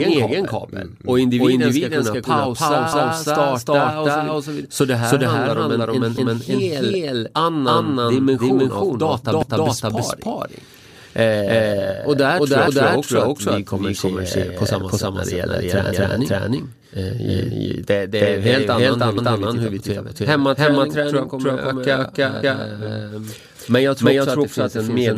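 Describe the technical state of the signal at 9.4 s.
Just after "annan dimension av", a stutter runs from 9.43 to 9.68 s as a 250 ms piece plays twice. These are overlapping chunks: the speech was handled in 3 s chunks, each starting before the previous one ended.

Underneath, the whole passage carries an equally loud, dry echo about a third of a second behind. This is a doubled audio track, likely a second copy mixed in out of step.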